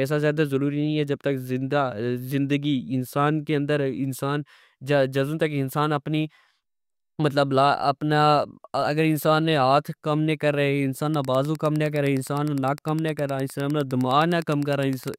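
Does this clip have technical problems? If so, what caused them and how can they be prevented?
Yes. Wi-Fi interference runs from 11.10 s to the end: a nearby Wi-Fi radio's beacon, sent every 102.4 ms, is rectified by the audio circuit into a steady ticking about ten times a second, roughly 25 dB below the speech. Moving the recorder away from routers and phones, or shielding its cables, prevents it.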